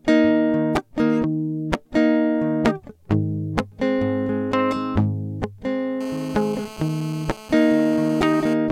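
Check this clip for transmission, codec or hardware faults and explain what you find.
One fault is present: GSM phone buzz from 6.01 to 8.54 s under the music. A nearby 2G handset on a call pulses its transmitter about 217 times a second, and the audio circuitry rectifies those bursts. The result is a steady, raspy, harmonic-rich buzz at about 18 dB below the signal. Its 217 Hz rate and harsh edge distinguish it from smooth 50 or 60 Hz mains hum.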